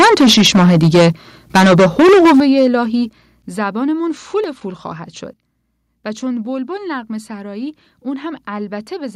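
From the start of the clip to 1.09 s, and again from 1.55 s to 2.75 s, the loudest syllables of the speech carry a harsh, crackling edge with flattened tops on the peaks. That is microphone overload. The input was likely set so high that the signal tried to exceed the converter's full scale by about 12 dB in the first stretch and about 13 dB in the second. The waveform crests are sheared off, affecting around a fifth of the samples early on and nearly a third later.

At 2.4 s, while the second overloaded stretch is still running, the level of both the speech and the background drops abruptly by about 9 dB. Two more drops follow, about 7 dB at 3.42 s and about 4 dB at 4.44 s. Each is a single-step change rather than a fade. This is the microphone volume being stepped down, likely by the call software reacting to the clipping and cutting the device's input gain in successively smaller increments.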